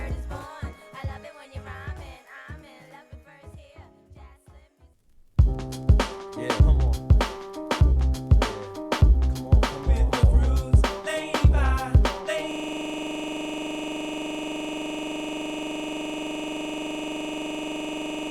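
From 12.51 s to the end, one 42.67 ms slice repeats as a rapid 23.4 Hz stuttering buzz, a system hang loop that fits a frozen 2048-sample ring buffer.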